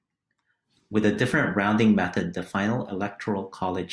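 No technical faults can be heard anywhere in this speech recording, with the signal holding steady and continuous throughout.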